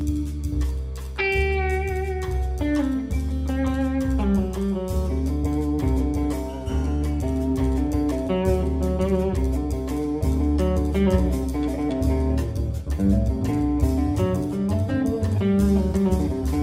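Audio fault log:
Throughout, channel delay (comb filtering): one side lags the other by roughly 10 ms, so summing to mono cancels shared content at fixed notches from around 50 Hz, then every 100 Hz or so, leaving the sound hollow and phasey.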